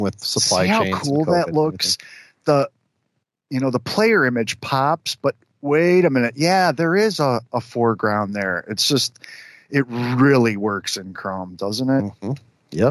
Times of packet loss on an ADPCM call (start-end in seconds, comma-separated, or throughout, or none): none